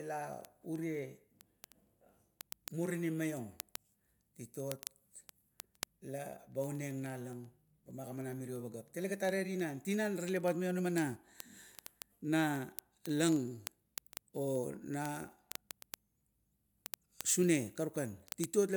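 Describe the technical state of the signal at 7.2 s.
At 7.2 s the speech carries word clock ticks, which run continuously from 0.10 s to 18.75 s. The receiving device is clocked independently of the digital source, with the two rates apart by something on the order of 500 ppm. Each time they slip past one another, a single sample is dropped or doubled, producing a sharp tick of uneven strength roughly every 40 ms, about 25 per second. On a spectrogram these show as evenly spaced, thin vertical broadband lines. The waveform shows isolated one-sample discontinuities.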